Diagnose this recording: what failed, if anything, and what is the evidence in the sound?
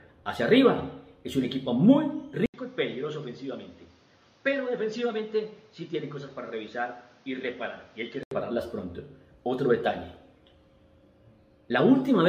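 The input device changed, likely at the driver level. At 2.46 s there is an 80 ms silence. The sound then drops around 10 dB, loses everything above 7.1 kHz, and gains a new noise floor about 30 dB down. Full quality returns at 8.31 s.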